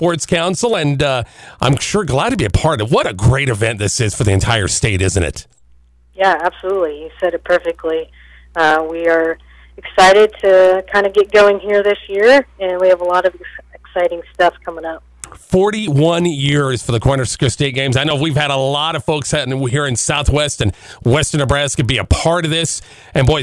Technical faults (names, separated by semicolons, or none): resampler restarted on every block